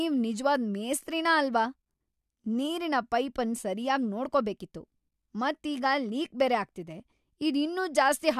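Nothing in this recording trips any of the checks here, so there's no technical fault to walk through at any point along the way.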